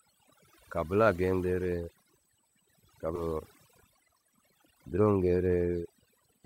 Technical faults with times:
0.00-6.46 USB whine
0.00-6.46 overdone noise removal
3.15-3.17 skip ahead
3.25-5.22 jitter buffer speed-up

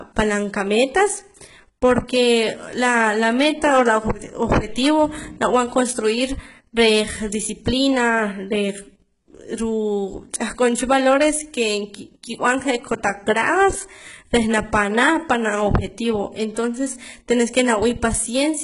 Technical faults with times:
0.00-18.63 HE-AAC compression

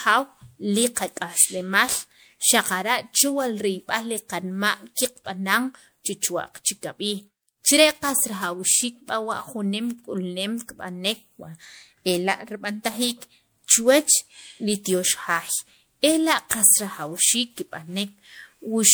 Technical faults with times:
0.00-18.94 generation loss

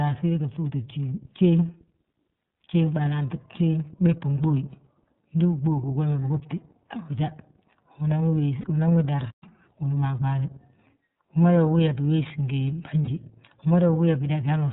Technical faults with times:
0.00-14.73 iLBC codec
2.54-2.60 lost iLBC frames
8.61-8.65 lost iLBC frames
9.30-9.43 playback stall
9.43-9.68 catch-up at higher speed
13.02-13.09 lost iLBC frames

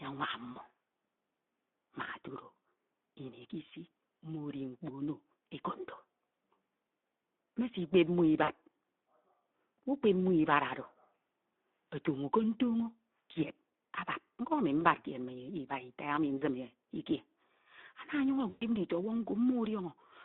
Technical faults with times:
0.00-20.24 Speex codec
0.51-0.63 VoIP packet loss concealed by the speech codec
8.43-8.51 VoIP packet loss concealed by the speech codec
14.79-14.86 VoIP packet loss concealed by the speech codec
16.37-16.44 VoIP packet loss concealed by the speech codec
18.49-18.66 VoIP packet loss concealed by the speech codec

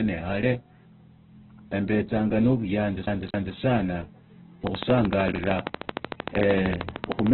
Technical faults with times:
0.00-7.33 Opus compression
4.67-7.33 train of clicks

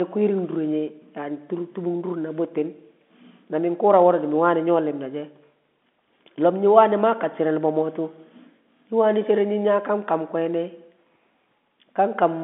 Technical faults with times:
none

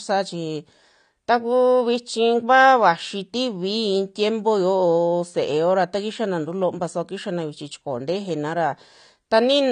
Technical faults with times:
0.00-9.71 AAC compression

